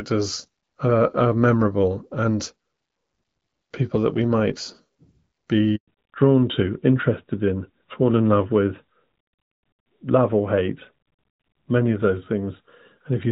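At 5.76 s a handover gap of 120 ms cuts the speech: the signal dies away within a few tens of milliseconds and stays silent until 5.88 s while the call shifts to another network link. Whatever was said during that interval is lost.

From 5.88 s to the end, the call falls back to narrowband. Before this point the speech carries the light coloration of HD Voice, consistent with AMR-WB at about 12.65 kbit/s. Afterwards the sound fits the AMR-NB codec at 12.2 kbit/s. Nothing above 4 kHz survives, so the speech turns duller and rougher.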